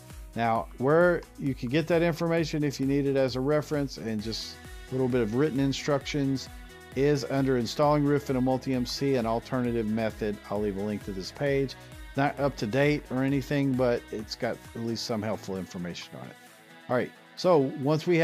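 No technical faults are audible.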